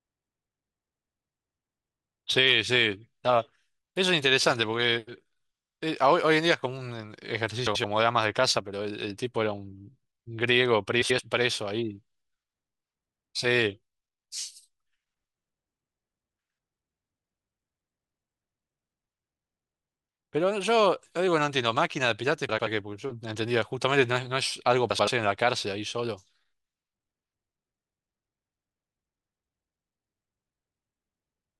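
Speech clip with frames out of order at 7.66–7.84, 11.01–11.20, 22.49–22.67 and 24.91–25.08 s. In each spot, two adjacent blocks of about 85 ms, consistent with runs of four frames, play swapped. You get a brief garbled flutter, but no time is lost.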